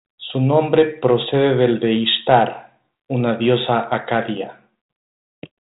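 Nothing stood out on listening to this speech, which comes through the 32 kbit/s G.726 ADPCM telephone path as that path normally sounds.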